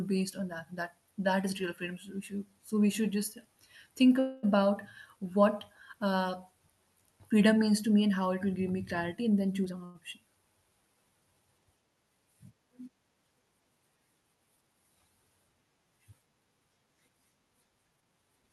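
From 4.19 to 4.45 s the speech halts and the last sound is drawn out as a fading buzz for about 235 ms before resuming where it left off. This is a call audio freeze, likely from packets held up in transit so the jitter buffer ran dry. A spectrogram shows smeared, repeating harmonics, and the waveform shows a decaying, periodic stretch with no true gap.

From 9.64 to 9.82 s a jitter buffer speed-up removes roughly a tenth of a second of audio, cutting out pitch-period slices so the speech runs at about 163% speed without changing pitch. It sounds hurried. In the waveform whole cycles are cut out while the cycle length and harmonic spacing stay unchanged. A second speed-up, from 17.96 to 18.50 s, runs at about 125% and drops roughly 150 ms.

Right after the first speed-up, from 9.85 to 9.97 s, a short stall from a late packet holds the current sound for 96 ms. The missing packet left the buffer empty, so the receiver stretched what it already had. 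It is heard as a brief hold with a slight buzz or dip, and a spectrogram shows flat, frozen harmonics.

All of this passed through an Opus call path, whose spectrum stops near 12 kHz.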